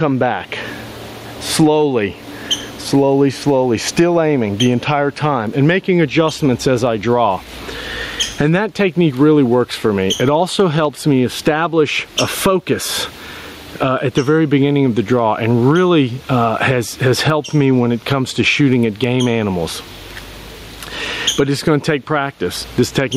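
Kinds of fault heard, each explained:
Gain pumping: the level swings by roughly 15 dB as the gain is pulled down on each loud sound, likely from excessive gain hitting a fast limiter.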